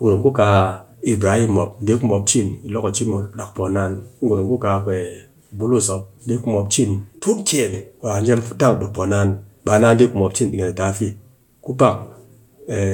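No technical faults can be heard anywhere in the recording.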